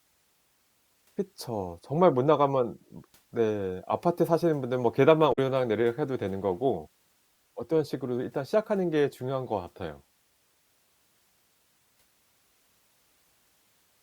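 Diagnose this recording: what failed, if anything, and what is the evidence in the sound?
Damaged data in a compressed stream, at the storage or codec stage: a short disturbance at 5.29 to 5.38 s as the decoder misreads corrupted frames and resyncs.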